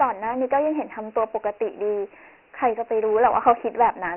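Throughout the clip the speech carries Dialogic VOX ADPCM damage. Nothing remains above 3 kHz, which fits 4-bit samples at 6,000 per second. Heavy quantisation leaves a gritty hiss clinging to each syllable. That grit, not just a narrow band, distinguishes it from plain telephone band-limiting.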